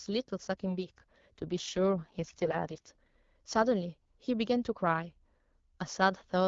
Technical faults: AMR rate drop

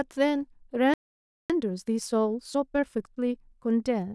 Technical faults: playback stall; time-compressed catch-up

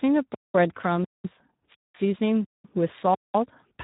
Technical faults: Speex codec; gap between chunks

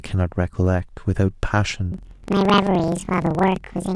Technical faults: planar audio read as interleaved

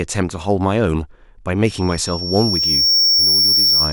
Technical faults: loudspeaker feedback squeal

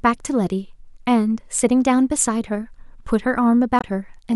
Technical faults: damaged data in a compressed stream

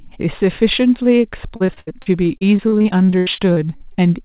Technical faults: repeated packet loss (robotic sound)

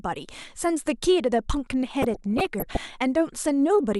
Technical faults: DAB burbling

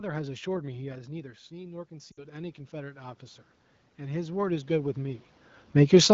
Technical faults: automatic gain rising; lost AMR speech frames

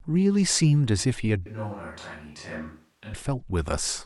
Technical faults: switch to a distant microphone

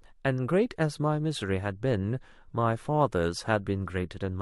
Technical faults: compressed frames skipped

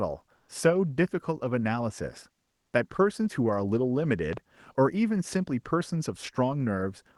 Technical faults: comfort noise in place of the background; loud pop

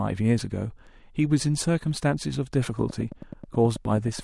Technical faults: train of clicks

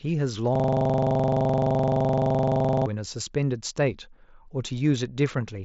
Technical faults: system hang loop

